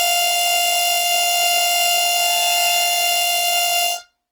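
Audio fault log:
Throughout: Opus compression. The music sounds grainy and rough, with tones that turn noisy, and the damage is plainly audible. The cause is likely a low-rate Opus encode in its music (CELT) mode, which fits a rate around 16 kbps. When bits run short, this mode keeps each band's energy but fills the band with folded or noise content instead of leaving gaps, which trades swirling for grit. Bandwidth stays full, with content reaching about 20.6 kHz.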